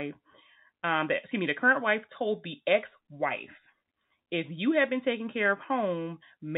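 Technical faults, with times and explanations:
Nothing here counts as a technical fault; the speech just comes through an ordinary G.711 telephone path, so it has that familiar phone-line narrowness with nothing above about 4 kHz.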